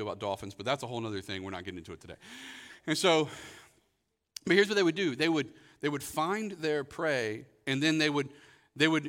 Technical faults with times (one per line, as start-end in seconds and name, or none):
none